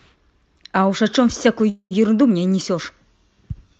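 From 1.69 to 1.93 s the speech halts in a call audio freeze. The last sound is stretched into a fading buzz or hiss for about 0.21 s, ending in roughly 70 ms of silence, likely because late packets left the jitter buffer empty. Unlike a packet-loss dropout, no speech is skipped. It resumes exactly where it stopped, about 0.21 s later, still carrying the Opus path's roughly 8 kHz bandwidth limit.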